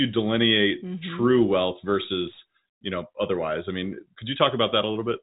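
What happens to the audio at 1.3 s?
Nothing goes wrong at 1.3 s: the speech runs on intact through that moment, with only the narrow telephone band of G.711 coding, which stops short of 4 kHz.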